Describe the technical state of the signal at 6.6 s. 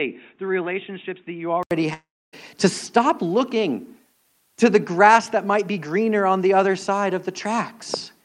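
At 6.6 s the speech signal is intact, with no audible fault at that moment.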